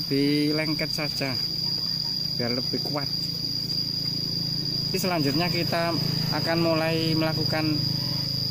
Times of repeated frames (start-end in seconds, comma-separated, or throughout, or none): 4.62-4.72, 8.01-8.11